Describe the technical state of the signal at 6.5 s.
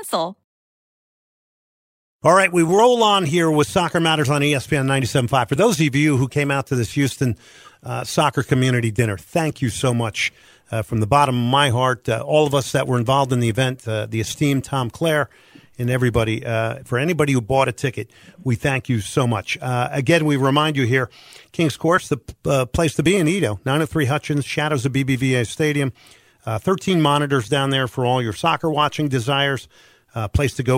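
The signal at 6.5 s is intact, with no dropout, distortion or other technical fault at that moment.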